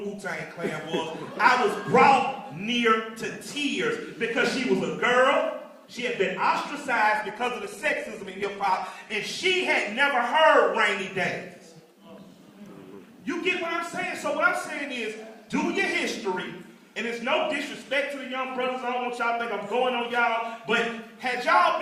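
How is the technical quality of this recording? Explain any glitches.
One glitch stands out: from 7.14 to 9.14 s the stream drops to a lower bitrate. The connection evidently slowed, so the player switched mid-flow to a leaner encoding, consistent with Opus falling from about 64 to 16 kbit/s. Treble abruptly turns dull and watery, with nothing above 12.3 kHz and no gap. A spectrogram shows a flat ceiling at 12.3 kHz across those two seconds, while the waveform stays continuous.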